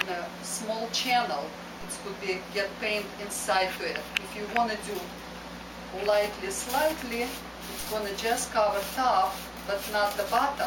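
At 1.81 s a DC step shifts the waveform's zero line by about −34 dBFS, as when a converter recalibrates or an offset input switches in. A 5 Hz high-pass then lets it decay. The jump is heard as a low thump, with the audio itself unchanged.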